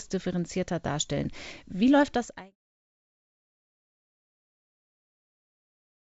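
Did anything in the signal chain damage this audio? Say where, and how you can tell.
No, nothing in the chain has hurt this one: the speech comes through a call link with its top end stopping at 8 kHz, which fits a wideband codec such as G.722, and the level eases away from about 2 s to 2.56 s like an ordinary editor's fade-out, with no click at the end.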